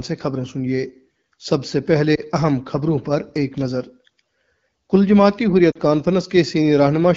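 At 2.15 to 2.21 s and again at 5.71 to 5.78 s there are lost AMR speech frames: the decoder patches the gaps with faded guesses, giving brief warbling dips, roughly one then two frames' worth.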